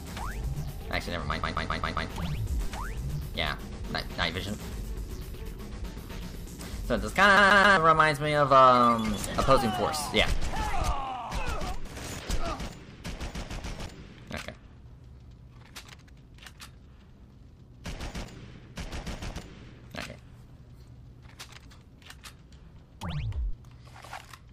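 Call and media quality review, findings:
CD stuck on one turn, 1.43 to 2.09 s and 7.37 to 7.77 s. Symptom: fast, even stutter, the same 133 ms slice replaying 5 times, then 3 times. Brief mute at each jump. Probable component: disc transport and laser pickup. Mechanism: a scratch kicks the laser back one track at the same point every revolution.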